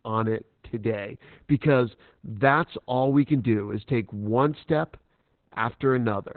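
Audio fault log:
Throughout: Opus voice compression, heavy; the speech is cut off near 4 kHz, muffled and hoarse, with a robotic buzz unlike a plain low-pass filter, pointing to SILK-only coding around 8 kbps.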